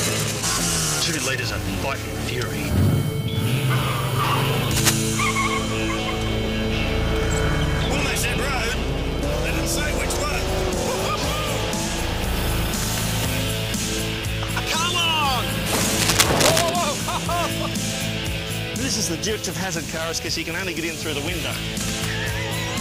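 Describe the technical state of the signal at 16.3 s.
At 16.3 s a dense, uneven scratching and rustling sits over the sound, roughly as loud as the sound itself, running from 15.78 to 16.71 s. This is cable scratch noise, likely from a worn cable, connector or control being moved, its contact resistance fluctuating rapidly.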